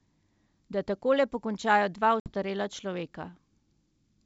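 At 2.20 s the speech drops into a hard-edged silent gap. This is packet loss on an ADPCM call. About 60 ms of audio is gone, spread over several packets. The receiver fills the hole with silence. Its adaptive predictor and step size no longer match the sender's. So when sound returns, the speech is slightly distorted. It recovers by about 2.32 s. The wideband G.722 coding around it keeps its clear upper range.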